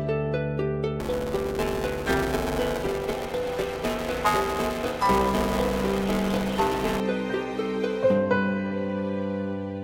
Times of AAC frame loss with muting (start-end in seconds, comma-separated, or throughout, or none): none